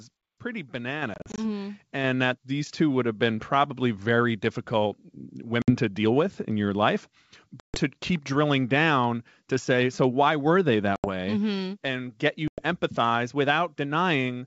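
A speech recording over a G.722 wideband call at 64 kbit/s, showing two faults. The microphone volume was stepped up: the call software raised the input gain by about 5 dB in one step at 1.02 s, so voice and background jump louder together. Packet loss on the ADPCM call dropped audio into hard-edged silent gaps, and the decoder's predictor and step size then lost track of the sender's. Speech returns slightly distorted before settling. The gaps fall in a scattered burst from 1.14 to 1.40 s (120 ms lost, longest gap 40 ms), then at 5.62 s (60 ms, just before "to deal with in"), 7.60 s (140 ms, right after "with in your life"), 10.96 s (80 ms), and 12.48 s (100 ms, just after "and get you").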